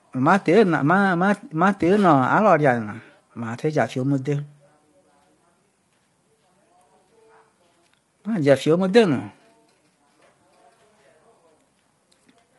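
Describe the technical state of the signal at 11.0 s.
At 11.0 s the speech carries plainly audible low-delay AAC compression, present throughout the clip. The likely cause is short codec frames that resolve harmonics poorly, which fits a low bitrate near 32 kbps. The voice sounds rough and grainy. A spectrogram shows smeared harmonics with noise between them and nothing above 11.6 kHz.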